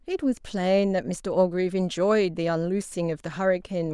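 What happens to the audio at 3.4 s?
Nothing goes wrong at 3.4 s; the speech there plays through cleanly, with no dropout, click, distortion or other audible fault.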